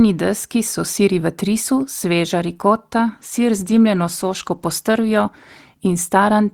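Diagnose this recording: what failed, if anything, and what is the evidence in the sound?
Call bitrate drop, codec stage: after "v trisu sveža rikota", from 3.06 s, encoding falls from 40 to 16 kbps; spectrogram highs vanish, sound muffles.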